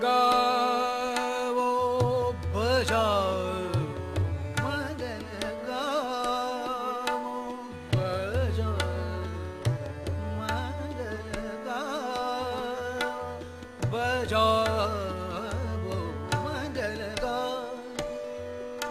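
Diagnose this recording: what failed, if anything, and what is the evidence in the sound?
Nothing failed; no faults heard.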